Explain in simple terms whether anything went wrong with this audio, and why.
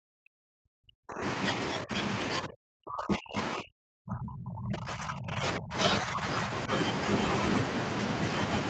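The speech drops out in four stretches: 0.0 to 1.38 s, 1.72 to 1.98 s, 2.39 to 5.75 s, and 6.03 to 6.7 s. It nearly vanishes in the first and third stretches and only dips in the others. This is likely speech suppressed in double talk, where the echo canceller mistook the talker for echo while both sides spoke.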